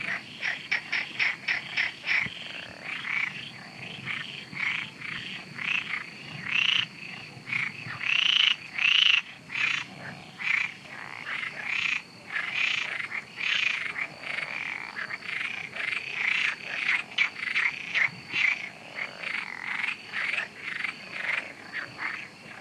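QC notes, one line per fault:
Throughout: timecode bleed. A steady chirping warble sits behind the sound from start to end. It is linear timecode leaking in from a neighbouring track or cable. The code is a square wave that flips between two pitches, near 1 and 2 kHz, as its bits change. That switching gives the warble its chirping character. The pattern repeats at 23.976 frames per second. It stays about 30 dB below the sound, so it is quiet but constant.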